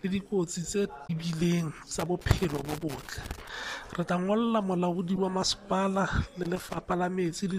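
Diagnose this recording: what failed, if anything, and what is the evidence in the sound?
Damaged data in a compressed stream, a storage or transmission fault at the codec stage, shows up as two brief glitches: one from 1.03 to 1.10 s and a shorter one from 5.16 to 5.18 s. Corrupted bytes make the decoder misread frames, lose sync and hunt for the next valid header. On a spectrogram each event is a sharp-edged block of smeared, broadband or oddly tonal energy that doesn't match its surroundings, and the waveform shows an abrupt discontinuity where decoding resumes.

Loose connector crackle points to the analogue wiring stage, with irregular scratchy bursts from 1.99 to 3.49 s and again from 6.43 to 6.77 s. A worn or dirty contact is making and breaking rapidly, so the signal is chopped on and off and any DC on the line turns each break into a pop. The waveform shows ragged dropouts and spiky transients at uneven spacing, and the spectrogram shows scattered vertical broadband streaks across both spans rather than a steady pattern.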